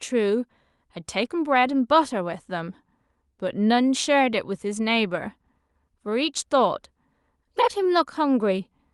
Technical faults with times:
none

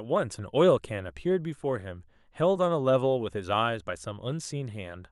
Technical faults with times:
none

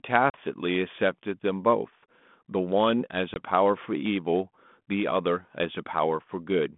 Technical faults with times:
0.30-0.38 packet loss on an ADPCM call
3.34-3.41 packet loss on an ADPCM call

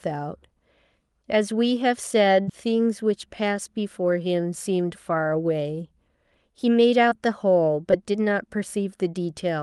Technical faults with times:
2.41-2.49 burst of packet loss
7.09-7.13 short concealed packet loss
7.91-7.94 short concealed packet loss

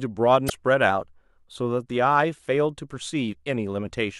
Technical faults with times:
0.46-0.51 damaged data in a compressed stream
0.90-1.56 drift correction step
3.29-3.34 damaged data in a compressed stream

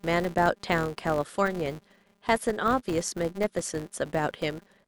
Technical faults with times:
0.00-4.87 filter restarted on every block

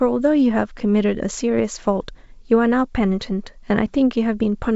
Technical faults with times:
none

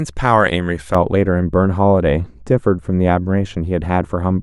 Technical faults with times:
0.95-4.43 de-emphasis applied wrongly

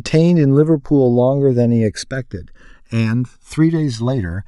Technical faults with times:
0.00-4.48 channels drifting apart

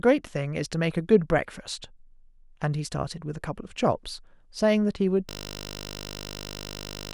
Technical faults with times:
5.29-7.14 system hang loop

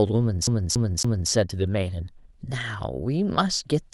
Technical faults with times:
0.47-1.31 CD stuck on one turn

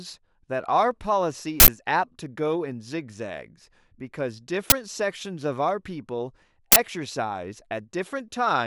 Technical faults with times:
1.60-1.68 uninitialised buffer
4.70 uninitialised buffer
6.72-6.76 uninitialised buffer

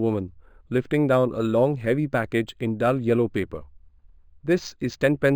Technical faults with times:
0.00-5.36 imaging from linear upsampling

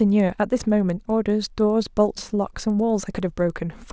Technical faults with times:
0.00-3.93 resampler restarted on every block

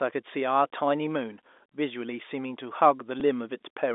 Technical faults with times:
3.20 packet loss with last packet repeated

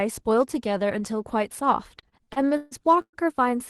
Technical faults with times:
1.99-3.16 repeated stalls (stutter)

